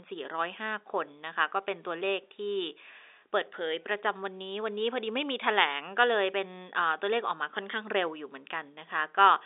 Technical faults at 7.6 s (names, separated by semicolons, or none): none